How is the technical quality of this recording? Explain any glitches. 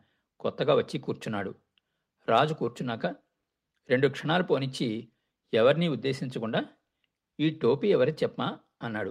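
No glitches to report: the speech recording holds steady throughout, with no audible technical fault anywhere.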